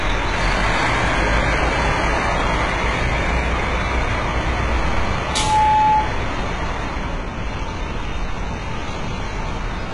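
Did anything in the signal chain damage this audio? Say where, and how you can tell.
Yes, at two stages. Throughout the clip, the codec stage shows heavy damage. Nothing reaches above 11 kHz. The treble that remains sounds rebuilt rather than captured. It is gritty and metallic, and its harmonics do not line up with the lower band. This likely points to HE-AAC compression at a very low bitrate, around 12 kbps. The encoder coded only the lower spectrum and copied it upward under a coarse envelope to fake the top end.

From 5.24 to 6.19 s, loudspeaker feedback squeal appears in the analogue acoustic path between microphone and loudspeaker. A single tone at 860 Hz swells out of the sound in roughly a third of a second. It then sits at about 5 dB above the sound itself. At that one frequency, the loop gain from speaker back into microphone exceeded one. The tone fed itself and grew by itself.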